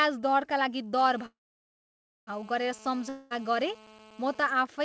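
From 0.99 s to 4.52 s a GSM phone buzz sits under the speech. It is a hard, raspy tone at about 217 Hz, rich in harmonics. A 2G handset nearby is on a call and sends radio bursts at that rate. The audio circuit rectifies them into sound. Being a call, the buzz stays steady. It runs about 24 dB below the speech and has no link to it.

At 1.26 s a call audio freeze begins, lasting until 2.29 s. Packets were likely held up in transit, and the jitter buffer ran dry. The receiver stretches the last sound into a short continuation that fades. Then about 0.94 s of silence follows. When the audio resumes, it picks up exactly where it stopped. Nothing is lost. The gap pushes everything after it about 1 s later.

From 3.09 s to 3.40 s there is a long network dropout. This time about 0.22 s of audio likely never arrived. The receiver covers roughly the same span with a continuation of the last sound. 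It fades but never reaches full silence. The speech then returns further along, with that stretch missing. The G.722 call path keeps everything below 8 kHz.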